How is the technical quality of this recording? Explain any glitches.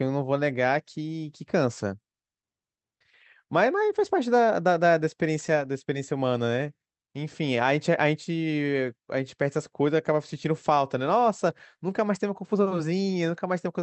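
Nothing here glitches or drops out; the speech comes over a call-style codec path, and what you hear of it is the upper treble rolling off around 8 kHz, the way a wideband call sounds.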